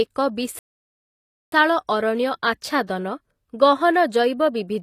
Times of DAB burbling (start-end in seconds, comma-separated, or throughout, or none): none